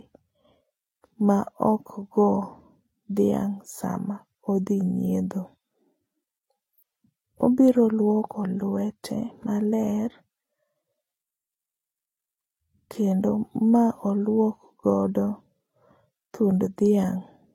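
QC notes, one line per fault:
Throughout, transcoding between lossy codecs: the speech carries two different sets of coding artefacts at once, likely from a Vorbis encode near 33 kbit/s later re-encoded as HE-AAC near 32 kbit/s. The second encoder spends its scarce bits reproducing the first one's damage while adding its own.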